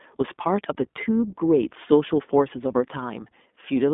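Throughout, the speech carries plainly audible iLBC codec damage: a rough, synthetic texture consistent with 20 ms frames, and a spectrogram empty above 3.7 kHz.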